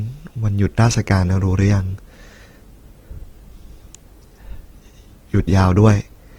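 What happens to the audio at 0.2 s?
Nothing goes wrong at 0.2 s; the speech there plays through intact, with no dropout, click or distortion.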